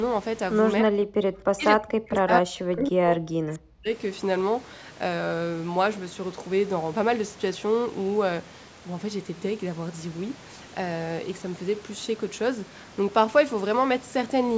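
From 0.82 to 1.31 s, and again from 1.53 to 3.92 s, the speech sinks sharply, by something like 40 dB at its lowest. This is speech suppressed in double talk, most likely from an echo canceller that mistook the talker for loudspeaker echo while the far side spoke and turned both down. Unlike a network dropout, it stays tied to overlapping talk.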